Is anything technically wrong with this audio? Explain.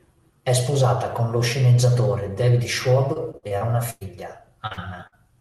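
Yes, the speech has three kinds of packet-loss damage, all in its second half.

Repeated packet loss (robotic sound) runs from 3.13 to 4.03 s. Audio went missing six times in under a second, with the longest hole about 104 ms. Each time, the receiver filled the gap by extending the last sound, so roughly a quarter of that stretch is synthetic continuation rather than real signal. The result is a choppy, mechanical texture with pieces of speech dropped out.

Short concealed packet loss occurs twice, back to back, at 4.67 to 4.73 s and 4.73 to 4.79 s. Each loses about 40 ms. The decoder papered over each hole by carrying the preceding pitch or noise forward, then cross-faded back into the real signal. It is heard as a quick double smear or wobble, and a brief consonant there can drop out entirely.

A burst of packet loss hits at 5.07 to 5.14 s, losing about 60 ms in one run. The receiver prolonged the last sound while fading it down, so a voiced moment turns into a short held buzz and an unvoiced one into a dying hiss. 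The speech then picks up again slightly further on, with the material in between gone.

The call path itself sounds like Opus, and its band-limited top end points to roughly 12 kHz bandwidth at a modest bitrate around 32 kbps.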